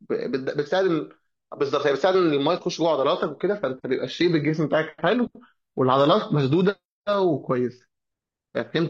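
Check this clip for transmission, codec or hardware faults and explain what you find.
One fault: a stretch of adaptive stream at a lower bitrate. From 3.13 s to 7.13 s the speech abruptly picks up more codec artefacts, then snaps back to full clarity with no gap either side. The four-second dip points to the player dropping to a low-rate rendition while the connection slowed. The sound fits HE-AAC at around 20 kbit/s replacing AAC-LC at around 96 kbit/s, its upper band rebuilt rather than coded.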